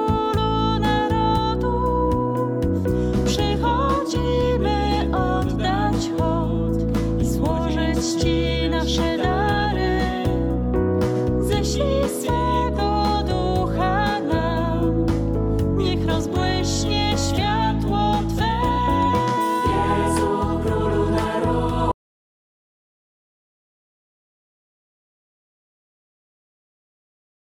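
From 21.92 s to the end the sound cuts out to silence, an audio dropout to silence, likely a lost input; waveform flatlines, spectrogram goes blank.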